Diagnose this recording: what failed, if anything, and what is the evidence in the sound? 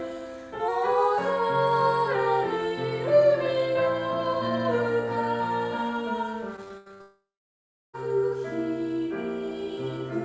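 The first fault sits at the driver or buffer stage. From 0.68 to 2.15 s the audio runs fast and sharp together. Speed rises by 5.3 percent and pitch by about 89 cents, just under a semitone. Speed and pitch move as one. That rules out a pitch effect. It is likely a drift correction step. A clock-matching resampler jumped its rate in one move to drain or refill its buffer.

The second fault is on the network, heard as repeated packet loss with a robotic sound. Between 6.56 and 7.02 s the audio turns choppy, with pieces missing. There are six short holes. The longest lasts 80 ms, and about 220 ms is missing in total. Nearly half of that stretch is concealment rather than real signal. The receiver kept repeating the last fragment to patch each hole. Then the next hole arrived before the sound recovered.

The third fault follows straight on from 7.02 to 7.95 s. This is a long network dropout, likely a stall in arrivals. 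Roughly 920 ms of audio never plays. At first the concealment buzz carries on and fades. The last 710 ms or so drops to silence. The audio then resumes further along, and the lost section is gone. The G.722 call path at 64 kbps carries everything, with nothing above 8 kHz.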